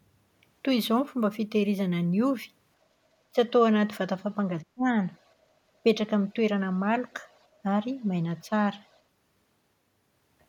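Speech suppressed in double talk at 3.32 to 3.38 s and 4.64 to 4.89 s: the speech dips by about 15 dB, then about 35 dB, likely because the echo canceller mistook overlapping talk for echo.

Other side's voice leaking through at 5.14 to 5.32, 7.31 to 7.46, 8.01 to 8.05, 8.39 to 8.45 and 8.88 to 8.99 s: faint scraps roughly 40 dB below the speech, likely loudspeaker echo left unremoved.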